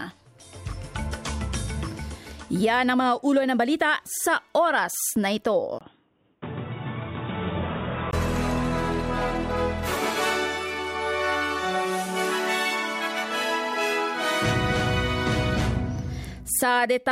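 At 5.79 s there's a gap of about 20 ms, and then the sound turns dull and boxy, with nothing above 3.8 kHz, a drop of around 5 dB in level, and a faint new noise floor far below the signal. At 8.13 s it clears up again. That pattern points to an input switched to a poorer device, likely a narrower-band microphone or headset profile taking over for those couple of seconds.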